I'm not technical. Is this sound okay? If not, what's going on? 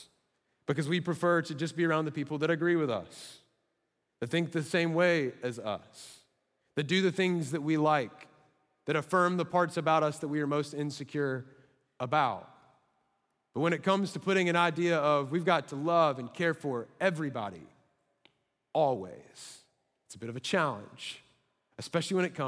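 Yes, no technical faults can be heard anywhere here.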